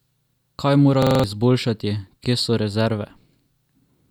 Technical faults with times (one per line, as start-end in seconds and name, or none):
1.02-1.24 system hang loop